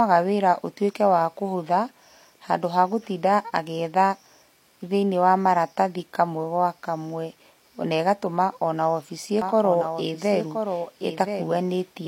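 Speech, with a doubled audio track from 9.42 s to the end. A full-band copy trails about a second behind, roughly 5 dB quieter, starting abruptly with no decay or room colour, unlike an echo. It likely comes from a second, slower capture path.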